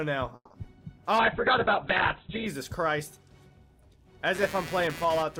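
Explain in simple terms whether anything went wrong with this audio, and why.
Four problems can be heard. From 0.35 to 0.66 s there is a call audio freeze: the sound stalls, is stretched out and then drops briefly to silence before resuming where it left off, likely because network packets arrived late.

Inside that stretch, at 0.63 to 0.65 s, short concealed packet loss leaves a brief smear where a tiny piece never arrived and was patched over.

From 1.19 to 2.54 s a call bitrate drop makes the audio coarse and muffled, with everything above about 4 kHz cut off, before it clears again.

From 4.35 s to the end, computer activity noise adds a buzz of roughly 150 pulses per second, caused by computer load disturbing the audio circuit's ground.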